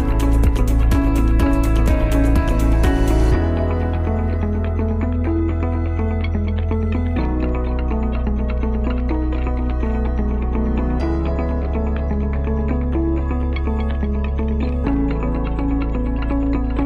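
No faults are audible anywhere in this audio.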